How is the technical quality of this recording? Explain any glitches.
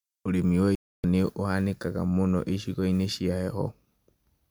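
The speech has one clear fault, a digital broadcast dropout from 0.75 to 1.04 s. The receiver stopped getting valid frames and muted, so roughly 290 ms of programme vanishes, consistent with around nine lost frames, before the sound returns further along.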